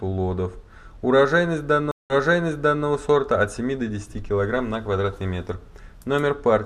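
At 1.91 s the audio drops out. This is a stream reconnect. The connection broke and the player went silent for about 185 ms. It then reconnected and started a fresh decoder mid-stream. The server resent a burst of earlier audio, so playback resumes 760 ms back in time. You hear a short gap, then a repeat of material already played. The restart comes in softly at first, and the disturbance ends by 2.86 s.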